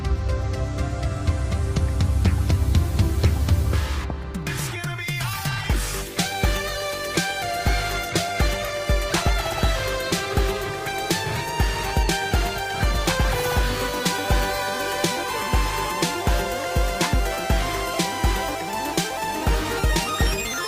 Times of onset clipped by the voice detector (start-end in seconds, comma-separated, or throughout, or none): none